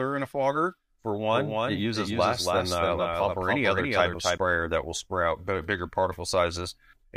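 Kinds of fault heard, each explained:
Doubled audio track: from 1.32 to 4.38 s the speech is joined by a second full-band copy about 0.3 s behind and roughly 5 dB quieter. The likely cause is a second capture path or an edit holding two copies out of step. A spectrogram shows every speech pattern repeated, offset and fainter, with no decay tail, and the copy starts and stops abruptly.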